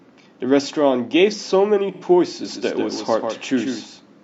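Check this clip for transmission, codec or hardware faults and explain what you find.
Two faults are audible in this speech clip.

From 1.93 to 2.03 s there is AAC frame loss with concealment. A gap of about 85 ms, which fits two lost frames, was filled by the decoder from the last good spectrum. It sounds like a smeared, noisy patch. A spectrogram shows a blurred, featureless block where harmonic detail vanishes.

From 2.45 s to the end there is a doubled audio track. A full-band copy trails the original by roughly 150 ms at about 5 dB lower, likely from a second, slower capture path mixed back in. It sounds like a dry, roomless slapback that begins abruptly. The waveform shows each burst repeated as a smaller shifted twin.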